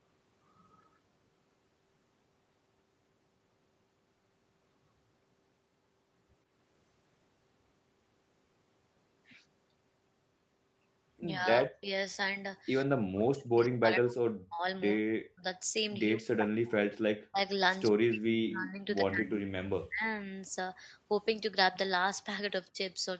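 From 11.35 to 11.9 s, 12.85 to 14.65 s, 14.99 to 15.45 s, 16.17 to 17.41 s, 17.9 to 20.04 s and briefly at 22.71 to 22.77 s, the speech sinks or breaks into fragments, most likely speech suppressed in double talk: an echo canceller mistaking the talker for far-end echo while both sides spoke. Drops reach about 40 dB, the last only about 25 dB. The waveform shows abrupt gouges in the envelope, and the spectrogram shows vertical gaps where the harmonics vanish.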